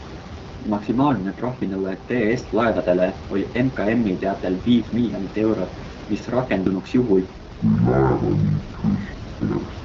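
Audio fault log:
Throughout: AMR wideband (HD Voice) codec. The speech sounds rough and raspy, with a buzzy, grainy edge on voiced sounds and a hissy top end in place of crisp consonants. Nothing is heard above about 7.4 kHz. At 8.85 kbit/s, one of the lowest rates, the vocal tract model and pulse excitation can't follow the voice closely below 6.4 kHz, and the band from there to 7 kHz is filled with shaped noise instead of real detail. Room noise sits about 13 dB below the speech.
7.36 to 9.85 s: section at the wrong speed. From 7.36 s to the end the speech suddenly turns deep and dragging, slowed to 0.543 times its proper speed, with the pitch dropped by roughly ten semitones. Speed and pitch fall together, the way they do when playback runs on the wrong clock, so the likely cause is an editor or player fitting this stretch to an incorrect rate rather than any change in the speaker.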